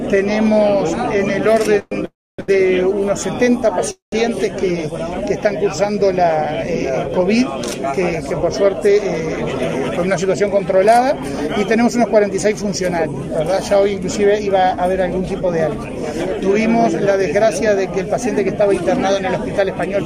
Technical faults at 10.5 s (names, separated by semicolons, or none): jitter buffer speed-up